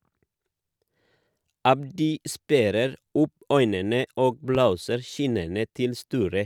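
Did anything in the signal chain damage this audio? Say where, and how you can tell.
Yes. A single loud pop at 4.55–4.58 s, right after "sperrer opp øynene og", stands roughly 10 dB above the speech. It is likely an analogue voltage spike, since the speech continues underneath rather than dropping out.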